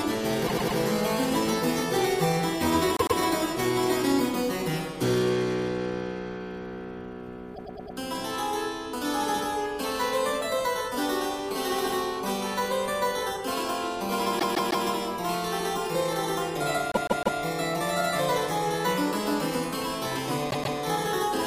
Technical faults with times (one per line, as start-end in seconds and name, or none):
0.46-0.77 repeated frames
2.97-3.18 repeated frames
7.54-7.96 repeated frames
14.38-14.85 repeated frames
16.92-17.39 repeated frames
20.49-20.76 repeated frames